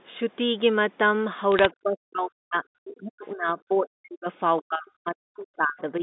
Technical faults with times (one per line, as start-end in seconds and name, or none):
1.52-1.66 bit errors on a digital phone line
1.83-4.27 speech suppressed in double talk
4.61-6.02 speech suppressed in double talk